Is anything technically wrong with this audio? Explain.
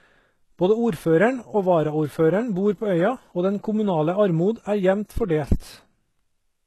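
Yes. The whole recording carries heavy damage that likely comes from HE-AAC compression. Nothing is present above about 12.3 kHz. The codec keeps only the lower spectrum. It fakes the treble by copying lower bands upward and shaping them with a coarse envelope. That synthetic top end does not match the real harmonics. So s sounds come out gritty, metallic or lisping, which fits a very low bitrate near 16 kbps.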